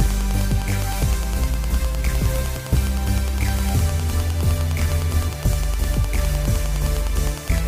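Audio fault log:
throughout Wi-Fi interference: a steady tick every 102.4 ms, about ten per second and roughly 20 dB under the signal, as nearby Wi-Fi beacons are rectified by the circuit; unlike mobile-phone buzz, it is a slow, evenly spaced tick, not a continuous burr.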